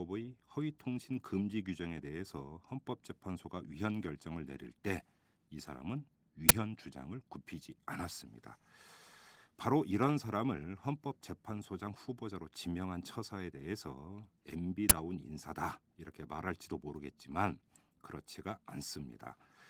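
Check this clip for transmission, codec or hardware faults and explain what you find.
There are two brief bursts from an uninitialised buffer in this speech, heard over light, fullband Opus voice compression.

Uninitialised buffer, at 6.49 s and 14.90 s: an output block was played before audio was written into it, so leftover memory came out as a sharp, loud digital burst. Each lasts about 12 ms, which fits a 512-sample buffer.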